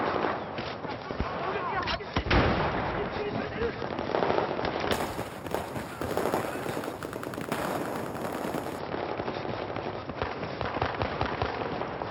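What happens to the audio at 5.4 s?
At 5.4 s the audio is inside a stretch of imaging from sample-and-hold upsampling, running from 4.92 to 8.79 s. The rate was raised by holding each sample, with no smoothing filter. The spacing points to audio at 12 kHz lifted to 48 kHz. Mirrored copies of the spectrum sit above the true band, the first between 6 and 12 kHz, about 18 dB below the signal. They sound like a bright metallic fizz that tracks the level.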